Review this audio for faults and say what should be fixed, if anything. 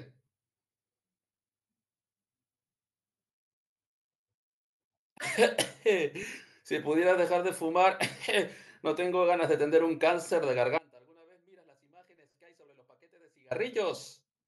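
From 10.78 s to 13.51 s the speech abruptly drops away for about 2.7 s, leaving only faint sound roughly 30 dB below its normal level before snapping back. This audio dropout to a faint residue most likely comes from the wanted signal being cut upstream while the chain after the break stayed live. To prevent it, secure and monitor the connection feeding the input so the source cannot be interrupted mid-recording.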